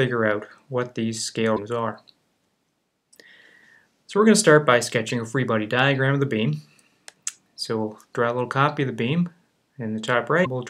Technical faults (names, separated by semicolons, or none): broken MP3 bit reservoir